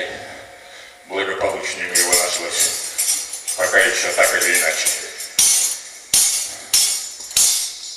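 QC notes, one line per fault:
No fault found in the QC notes, so there is no line per fault to give.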